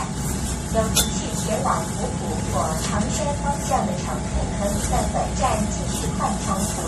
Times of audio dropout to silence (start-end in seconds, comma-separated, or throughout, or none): none